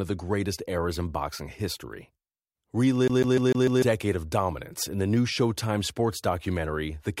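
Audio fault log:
3.08 to 3.82 s, CD stuck on one turn: the speech locks into a fast, even stutter, the same 0.15 s slice replaying five times, each pass clipped off by a tiny dropout, before it breaks free just ahead of "of dominance in the". That's the classic skipping-disc sound. A scratch kicks the laser back a track at the same point every revolution, so playback keeps landing on an identical short loop, with a brief mute at every jump.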